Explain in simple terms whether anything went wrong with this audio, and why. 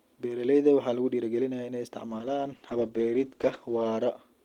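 Something did go wrong. From about 2.06 s to 3.97 s, right after the speaker says "lagu dhiirigelinayaa in ay", the speech turns rough and muffled. This is a call bitrate drop. The call's connection estimate fell, so the encoder had to describe the sound with far fewer bits. It coded the speech more coarsely and lost the crisp upper detail. For most of that stretch, about 1.8 s, quality sat at its worst before recovering.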